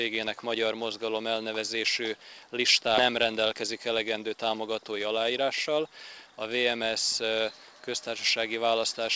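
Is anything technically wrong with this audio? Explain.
Yes, two timing problems. At about 2.98 s there's a skip ahead: roughly 400 ms of sound was dropped, so playback jumps forward with no gap. From 3.12 to 4.92 s comes a jitter buffer speed-up. The receiver trims tiny pitch-period slices to shed about 150 ms of backlog, so the sound runs 108% fast but keeps its pitch. The call path's G.722 codec, with nothing above 8 kHz, is working as designed.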